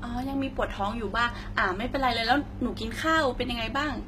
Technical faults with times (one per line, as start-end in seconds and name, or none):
0.00-4.08 HE-AAC compression